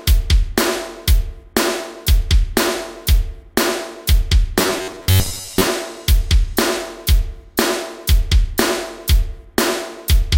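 Robotic sound from repeated short buffers, 4.59 to 5.68 s: the audio turns into a rigid, metallic buzz at 93.8 Hz, likely because new data arrived too seldom and a roughly 11 ms fragment was repeated, replacing about half the real signal.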